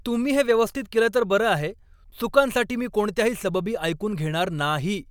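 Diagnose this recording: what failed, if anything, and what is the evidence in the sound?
Nothing in the chain has failed: the speech signal arrives continuous and stable throughout, with nothing in the sound pointing to a problem at any stage from capture to playback.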